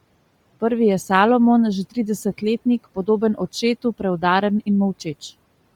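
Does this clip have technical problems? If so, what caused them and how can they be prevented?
Yes. Bluetooth LC3 compression runs throughout the speech, likely from an LE Audio link: heavy grainy, breathy artefacts show upper spectrum replaced by noise fill, consistent with 10 ms frames at a low bitrate near 32 kbps, despite content reaching 20.2 kHz. The room noise, about 25 dB below the speech, is part of the recording rather than a system fault. Prevent this by recording over a wired connection or raising the LC3 bitrate.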